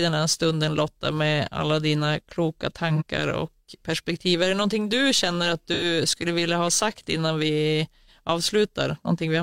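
At 2.95 s, right after "med alla dina kloka", there is AAC frame loss with concealment. About 43 ms of the stream is missing, which fits one lost frame. The decoder fills the gap from the last good spectrum, so the speech turns briefly into a smeared, noisy or phasey patch. A second loss runs from 5.73 to 5.84 s, between "någonting du känner att" and "skulle vilja ha sagt". It covers about 85 ms, likely two frames, and leaves a longer smeared, noisy or phasey patch.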